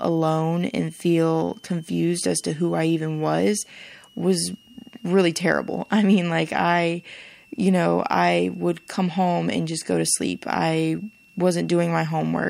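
Running through the whole of the speech is a switching supply whistle: a thin, high tone near 3 kHz that wanders between about 2.68 and 3.14 kHz. It comes from a switching power supply cycling at an audible rate, with its ripple leaking into the audio path. It sits about 35 dB below the speech. A spectrogram shows a narrow, slightly wavering horizontal line across the full width. The waveform shows nothing visible.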